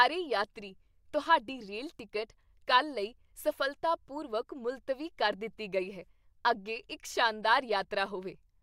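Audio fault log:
No technical faults can be heard anywhere in this speech recording.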